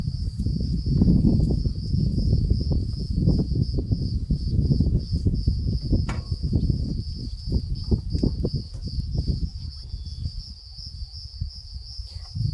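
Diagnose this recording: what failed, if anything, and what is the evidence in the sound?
A resampler restarted on every block, at the sample-conversion stage, from 7.6 to 9.3 s: ticks at 10 per second mark each 100 ms block edge of the 48 kHz to 24 kHz conversion. A spectrogram shows evenly spaced thin vertical lines, and the waveform shows small discontinuities.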